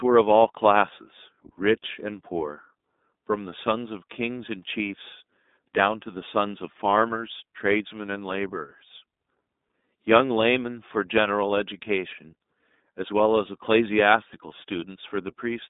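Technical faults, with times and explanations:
Throughout, iLBC codec: the speech has been passed through the narrowband iLBC coder, whose frame-by-frame coding points to its 20 ms, 15.2 kbps mode. Each frame's excitation is rebuilt on its own, without using the previous one, so the plainly audible codec damage comes through as a slightly rough, synthetic buzz. The telephone line passes roughly 200 Hz to 3.7 kHz, and nothing reaches above 3.8 kHz, leaving the sound dull and lacking crisp consonants.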